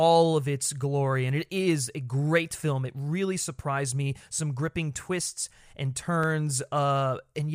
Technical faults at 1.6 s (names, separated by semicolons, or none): clock drift buffer slips